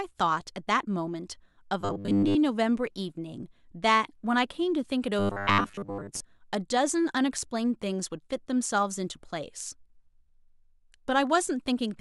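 From 1.81 to 2.36 s and again from 5.19 to 6.22 s, the speech turns into a rigid metallic buzz fixed at 100 Hz, robotic sound most likely from repeating 10 ms buffers over most of the stretch.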